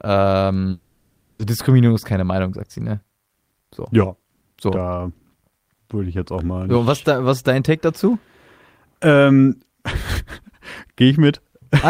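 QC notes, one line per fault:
0.71–1.41 s, long network dropout: The speech breaks off and the last sound smears into a fading buzz for about 680 ms, then near-silence for about 70 ms. Speech returns with that stretch missing. A lost block of packets is the likely cause.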